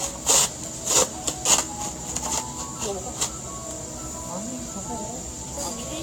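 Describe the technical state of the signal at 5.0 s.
At 5.0 s the sound is swirly and hollow, with smeared transients and a watery, phasey texture, and nothing is present above 19 kHz. The same fault runs through the whole clip, so this moment is representative. The likely cause is generation loss: the audio appears to have been re-encoded about seven times with a lossy codec, which fits repeated Vorbis passes at roughly 65 to 68 kbit/s. Each pass quantised the signal again on a shifted frame grid, so the noise accumulated beyond what a single encode at that bitrate would leave.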